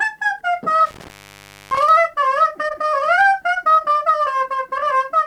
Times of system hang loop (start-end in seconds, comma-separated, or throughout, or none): none